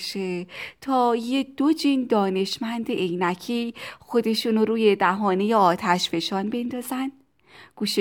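No technical faults can be heard anywhere in the recording.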